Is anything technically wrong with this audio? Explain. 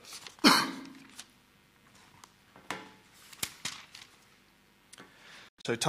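Yes, there is a digital broadcast dropout near the end, from 5.48 to 5.68 s. The receiver stopped getting usable frames and muted until good ones returned, so the sound drops out in short holes spread over about 190 ms, losing roughly 128 ms in total, with the longest gap 96 ms. That pattern fits about four corrupted frames. Each cut has a 3 ms fade, so it sounds like abrupt stutters rather than clicks. On a waveform these are flat near-silent stretches; on a spectrogram, blank vertical bands across all frequencies.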